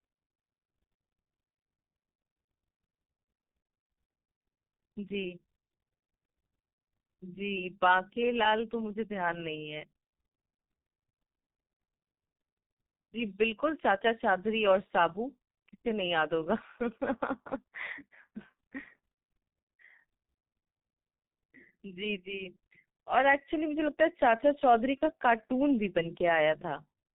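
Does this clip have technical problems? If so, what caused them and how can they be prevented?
Yes. The whole clip carries G.723.1 codec damage, and heavy damage at that. The speech is muffled because nothing above 4 kHz survives. It also sounds hoarse, and consonants smear together, because the codec's voice model updates only once per 30 ms frame. The thinness points to the 6.3 kbit/s mode. It differs from simple low-pass filtering through that rough, hoarse texture and the blurred consonants, not just missing treble. To prevent it, use a wideband codec at a higher bitrate, such as Opus.

From 24.98 to 25.05 s there is VoIP packet loss concealed by the speech codec. One missing 30 ms frame was filled by extending the last pitch and filter settings at falling gain. The result is a brief, fading smear. The voice then stays weak or distorted until the decoder's frame-to-frame state recovers. 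A dropout or splice would give silence or a click instead of this stretched sound. To prevent it, add jitter buffering and forward error correction on the network path.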